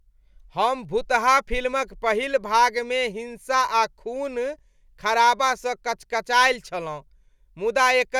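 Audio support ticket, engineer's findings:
No fault found on the speech recording. Nothing heard points to any component in the chain, so no change is needed.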